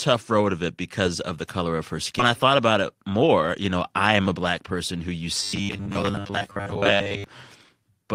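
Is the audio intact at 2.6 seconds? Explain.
No. From 2.29 to 3.49 s the speech goes through a jitter buffer speed-up. The receiver's buffer had built up surplus audio, so it cut out short stretches of one or a few pitch periods again and again, about a tenth of a second in total, playing the passage at 106% speed. The pitch stays the same but the speech sounds slightly rushed leading into "you know I am". On a spectrogram the harmonic spacing is unchanged while syllables look squeezed in time, and the waveform shows whole periodic cycles missing at the splice points.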